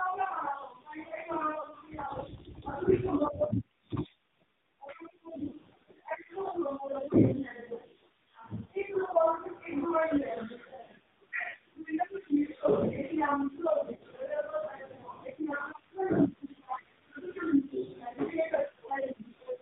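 Throughout the speech, the voice is buzzy and synthetic, with nothing above 4 kHz, typical of heavy damage from the AMR narrowband mobile codec. Its vocal-tract model works from very few bits, which fits a low mode around 5.9 kbps.

At 1.62 s there is a short dip and warble, and at 5.48 s, 11.50 s and 13.96 s slightly longer smeared, fading stretches. These are lost AMR speech frames: the decoder replayed the last good settings at falling gain, which fits one lost frame, then pairs of about 40 ms.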